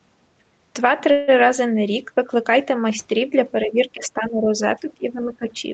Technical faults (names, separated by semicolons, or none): call audio freeze; speech suppressed in double talk